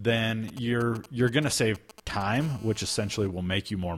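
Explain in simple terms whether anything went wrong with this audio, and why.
A nearby 2G mobile phone was exchanging short signalling messages with the network, and the recording circuit picked up its radio pulses. From 0.48 to 2.37 s, this produces GSM signalling bursts: galloping clusters of ticks and brief rough buzzes at 217 Hz under the speech.

At 2.07 s, two consecutive pieces of the audio stream were stamped with overlapping times, and the player trimmed away a sliver of sound that was never actually duplicated. This overlap between stream segments, near a boundary that fits segments about 2 seconds long, is heard as a tiny click or skip.

From 2.41 to 3.27 s the same phone was in an active call, transmitting radio pulses 217 times a second without pause, and the circuit again turned them into sound. This GSM phone buzz is a steady, harsh, raspy drone at 217 Hz that has nothing to do with the speech.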